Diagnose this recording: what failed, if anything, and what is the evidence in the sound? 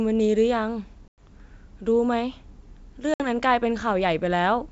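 Network stage: this is packet loss on the ADPCM call, carried over a G.722 link. You get hard-edged silent holes at 1.08 to 1.27 s, with 100 ms lost, and at 3.14 to 3.27 s, with 60 ms lost. Afterward the decoder's predictor and step size have drifted from the sender's, so speech returns slightly distorted before settling.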